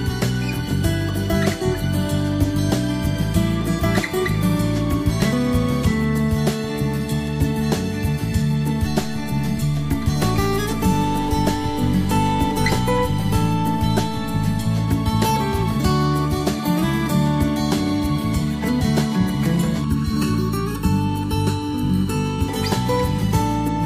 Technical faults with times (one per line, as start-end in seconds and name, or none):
19.84-22.49 channel delay (comb filtering)